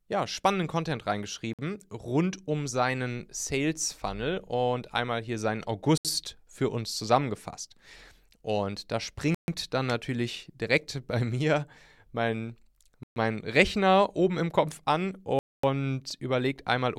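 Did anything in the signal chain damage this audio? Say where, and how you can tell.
Yes. Bluetooth stall at the wireless playback link: the speech cuts to silence and then resumes at 1.53 s (53 ms, before "rund um seinen"), 5.98 s (72 ms), 9.35 s (136 ms, before "dann natürlich direkt"), 13.03 s (128 ms, after "bei mir mein") and 15.39 s (244 ms). The likely cause is interference delaying packets, so the receiver's buffer ran empty until the resent data arrived.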